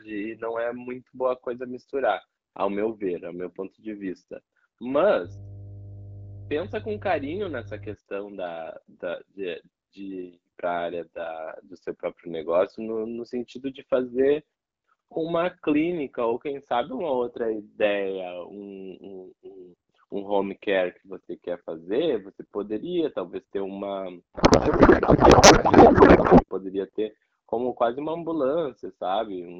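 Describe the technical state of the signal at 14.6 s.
At 14.6 s the speech is intact, with no fault present, carried through the AMR wideband (HD Voice) codec at 12.65 kbit/s.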